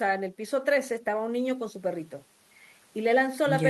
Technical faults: none

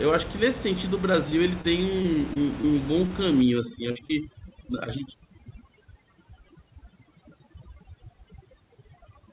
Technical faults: short concealed packet loss; short stall from a late packet; repeated packet loss (robotic sound); overdone noise removal

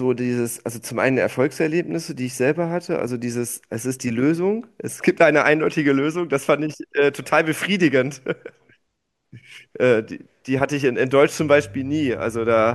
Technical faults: mains hum

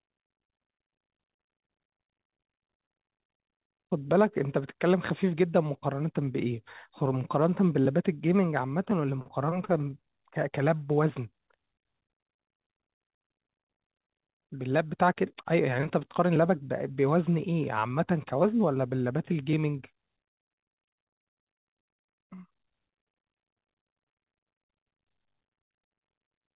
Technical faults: none

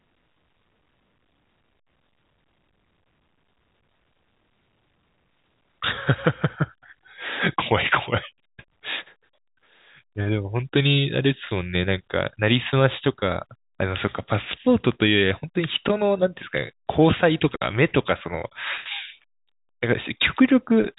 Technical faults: none

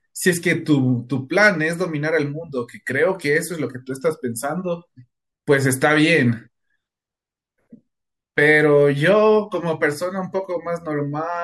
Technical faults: corrupt frame decoded

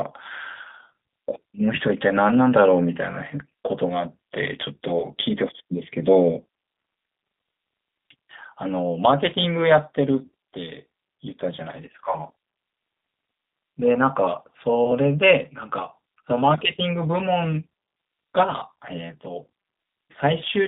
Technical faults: G.729 codec; VoIP packet loss concealed by the speech codec

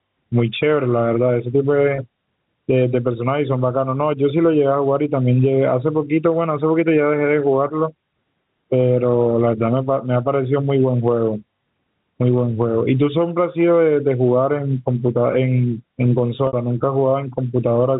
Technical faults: gain pumping; packet loss with pitch repetition

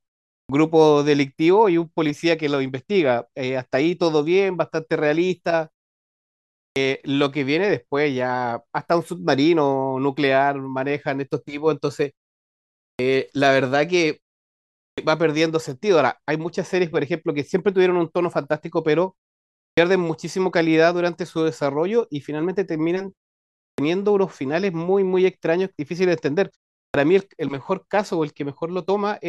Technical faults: clipped start after a pause

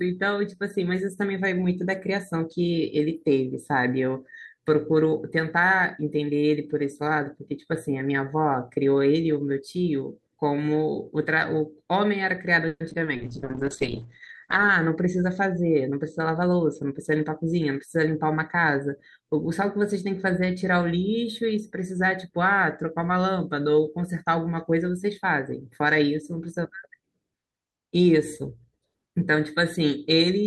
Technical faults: repeated packet loss (robotic sound); call bitrate drop; jitter buffer speed-up

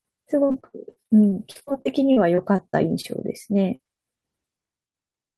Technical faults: repeated packet loss (robotic sound); short concealed packet loss

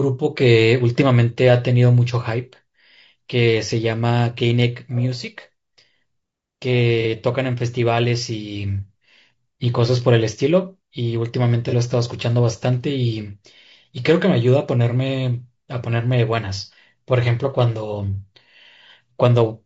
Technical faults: low-delay AAC compression; AAC frame loss with concealment

